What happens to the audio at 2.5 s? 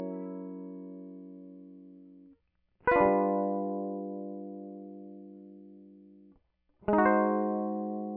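Nothing goes wrong at 2.5 s: the music plays through that moment intact, with no audible fault.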